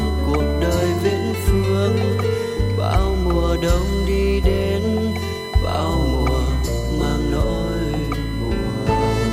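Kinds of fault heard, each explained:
USB whine, throughout: a steady whine pitched at 1 kHz, loudest at its fourth multiple, 4 kHz, about 20 dB below the sound. The USB bus draws current in 1 ms frames, and that pulsing leaks into the audio through shared power or ground.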